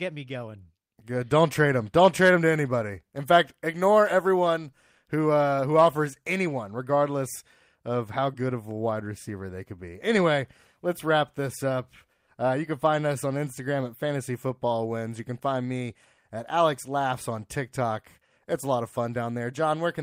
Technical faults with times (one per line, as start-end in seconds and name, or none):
none